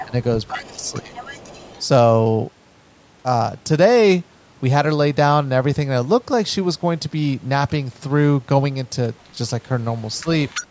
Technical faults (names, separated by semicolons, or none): other side's voice leaking through; speech suppressed in double talk